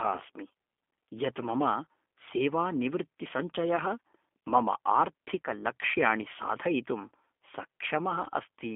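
From start to finish the speech carries G.729 codec damage: band squeezed to 250 Hz–3.5 kHz, and a rough, synthetic buzz that fits an 8 kbit/s rebuild.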